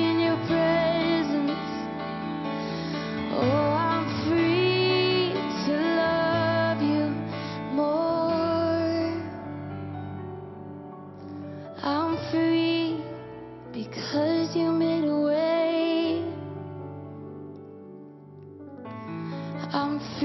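Nothing technical goes wrong anywhere in this clip; there are no dropouts, glitches or other faults to point to.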